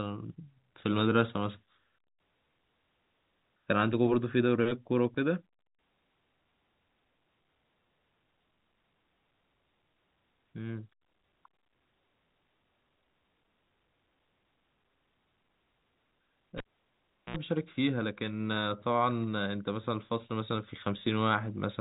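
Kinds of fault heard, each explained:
Cable pulled and plugged in: a live lead is yanked out and pushed back, so from 16.58 to 17.36 s the speech drops away with a pop, leaves about 0.73 s of near silence, then a roughly 65 ms burst of 60 Hz mains buzz as only the plug tip makes contact, and a second pop when the signal returns. On a waveform this shows as two sharp spikes framing a flat gap. A spectrogram shows broadband vertical lines at each pop and stacked 60 Hz harmonics during the buzz, all within the telephone band the G.711 coding leaves.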